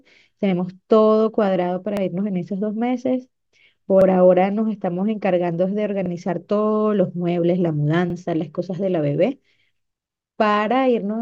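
Overlapping chunks in the speech at 1.97, 4.01, 6.06, 8.10 and 10.15 s: each 2 s chunk begins 44 ms early, replaying that sliver as a stutter.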